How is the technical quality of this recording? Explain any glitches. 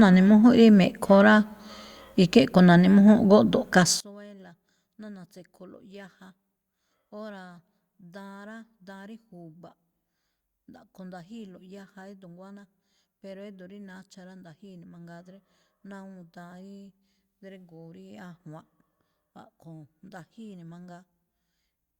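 Poor from 4.0 s onward. One channel inverted likely explains the collapse: from 4.0 s to the end, the summed speech drops about 29 dB as the matched channels cancel, leaving a faint residue, seen as a sudden waveform shrink and a dim spectrogram.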